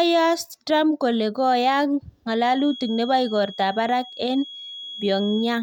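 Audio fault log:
2.39 to 5.63 s, feedback whistle: just after "kole koyaak" a thin, steady tone near 3.3 kHz appears behind the speech and holds to the end of the clip, sitting roughly 15 dB under the talker and swelling and fading slowly in level. The likely cause is a loudspeaker-to-microphone loop balanced right at the edge of feedback, so a single high frequency keeps ringing without building into a runaway howl.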